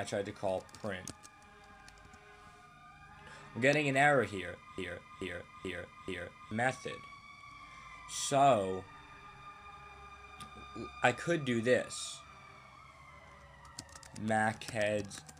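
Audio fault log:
4.78–6.51 s broken-record loop: a 433 ms piece repeats identically four times, likely from a stalled stream. Unlike echo, nothing decays, and the audio due in that span is lost.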